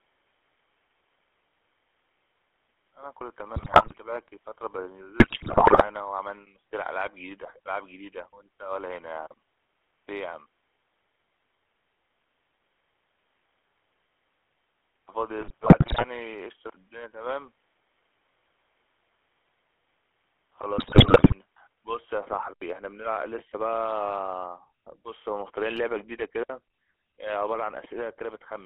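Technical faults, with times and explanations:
Throughout: GSM full-rate codec. A vocal-tract model driven by sparse pulses at 13 kbps gives buzzy, gravelly speech, confined to a 300 to 3400 Hz line band.
0.0 to 22.6 s: input switched to a poorer device. Likely a lesser input carries this stretch, with faint added noise about 40 dB down, then an 80 ms silence at the changeover.
3.56 to 3.98 s, 5.20 to 5.88 s, 15.39 to 16.05 s, 20.78 to 21.35 s: GSM bit errors. Corrupted filter, pitch and gain values break the speech into squawks, pops and gargling for 0.4 to 0.7 s each.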